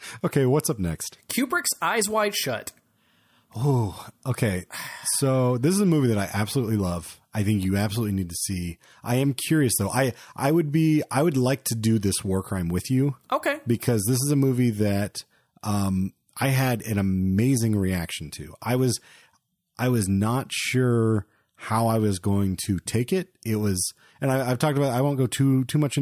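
No technical faults audible here.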